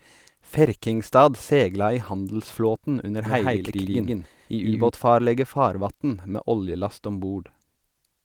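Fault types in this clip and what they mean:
Doubled audio track: From 3.26 to 4.9 s the speech plays twice. A full-band copy trails by roughly 150 ms, about as loud as the original. It has no decay or room colour, and it cuts in and out abruptly. A slower second capture path or an out-of-step edit is the likely cause.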